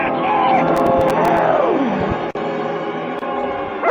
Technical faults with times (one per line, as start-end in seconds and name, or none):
0.76-1.39 processor overload crackle